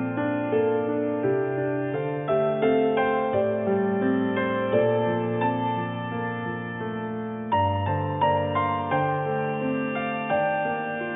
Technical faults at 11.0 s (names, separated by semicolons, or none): none